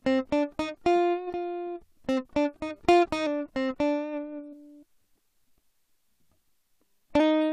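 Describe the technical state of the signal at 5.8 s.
At 5.8 s the music plays through intact, with no fault in the signal at that point.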